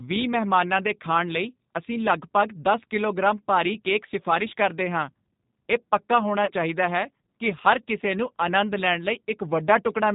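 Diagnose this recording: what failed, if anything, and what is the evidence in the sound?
The codec stage is at fault throughout. The speech has the rough, slightly synthetic grain of a CELP coder, and nothing above 4 kHz survives. That fits G.729 (the G.729A variant) at 8 kbit/s rebuilding each frame from a vocal tract filter, a pitch predictor and a few pulses. The damage is plainly audible. Unlike plain low-pass filtering or telephone band-limiting, the texture itself is buzzy and modelled rather than just dull.

The network stage failed briefly at 6.45 to 6.52 s, just before "ਚਾਹੀਦਾ ਹੈ ਕੀ ਹਰ". This is VoIP packet loss concealed by the speech codec. About 30 ms of audio is missing, which fits a single lost packet. The decoder filled the gap by stretching its last pitch and filter into a fading buzzy tone or coloured noise, and the voice stays weak or distorted afterwards while the predictor recovers. 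A plain dropout would be abrupt silence instead.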